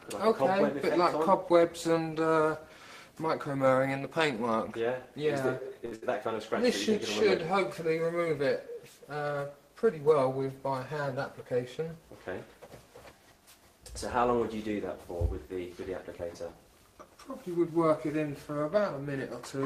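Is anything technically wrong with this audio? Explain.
Yes. There are three faults, all of the kind a network receiver produces when packets arrive late or not at all.

From 5.85 to 5.93 s there is a short stall from a late packet. A packet was not there when it was due, so the jitter buffer ran empty. The receiver stretched the last sound by 60 ms and then resumed from the same point, adding 60 ms of delay. Nothing is lost, but one sound is held too long. On a spectrogram the frequency pattern runs flat and unchanging for those 60 ms. The waveform shows the same cycle repeating.

Right after, from 5.95 to 6.04 s, comes a burst of packet loss. The receiver filled 66 ms by continuing the last sound and fading it down. It then skipped ahead, so 80 ms of audio is gone. The result is a held sound that fades into a hiss or buzz, followed by an abrupt jump. A spectrogram shows energy smearing and decaying, then a hard edge where the spectrum changes without transition.

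From 11.14 to 12.00 s there is a jitter buffer speed-up. The buffer held more audio than its target, so the receiver repeatedly cut out short pieces one or a few pitch periods long, removing about 70 ms in total. The audio runs at 106% speed with unchanged pitch and sounds hurried. On a spectrogram the harmonic spacing stays the same while events sit closer together in time. The waveform shows small splice points.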